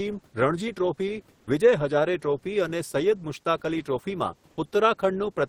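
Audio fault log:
1.39–1.47 s, comfort noise in place of the background: for about 80 ms the real room noise gives way to a smooth, featureless hiss about 13 dB quieter, likely discontinuous transmission with receiver-side filler. A spectrogram shows the textured background becoming an even, fainter wash, and the waveform envelope dips.
1.45–1.47 s, onset clipped by the voice detector: the first 20 ms of returning speech are missing, likely because the detector reacted late, so the sound begins abruptly without its soft build-up. The waveform jumps almost vertically out of the low filler, and the spectrogram shows a hard-edged start.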